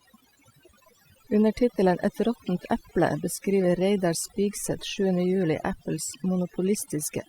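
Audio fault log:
Throughout, overdone noise removal: the noise reduction was pushed too hard, so frequency bands sitting near the estimated noise floor are pulled far down or gated off entirely. Quieter parts of the speech go with them, leaving near-silent gaps with twinkling specks.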